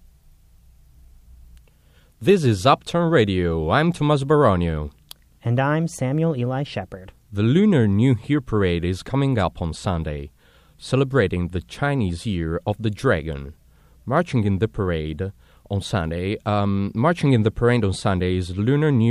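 No technical faults detected in the speech recording; nothing to flag.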